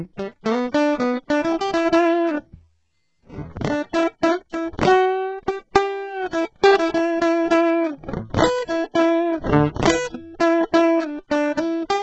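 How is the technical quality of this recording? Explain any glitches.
The technical quality is poor, with damage running through the whole music clip. The likely cause is HE-AAC compression at a very low bitrate, heavily damaged and consistent with roughly 8 kbps. The coder keeps only the lower spectrum and fakes the treble by copying lower bands upward under a coarse envelope. Nothing real survives above about 8 kHz, and the rebuilt top end has harmonics that fail to line up, so cymbals turn gritty and metallic.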